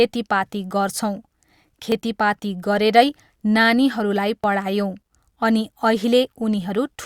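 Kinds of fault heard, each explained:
Dropped buffer (overrun): the speech jumps abruptly at 1.92 s and 4.44 s, each skipping roughly 20 ms, likely from samples being overwritten before the program collected them.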